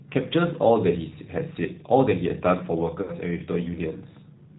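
Throughout, the G.729 codec, at 8 kbit/s, cuts everything above 4 kHz, leaving a hard spectrogram ceiling and a plainly rough, synthetic speech texture.

From 3.02 to 3.12 s, VoIP packet loss concealed by the speech codec extrapolates about 60 ms, fitting two lost packets, into a stretched, fading sound whose waveform envelope shrinks steadily.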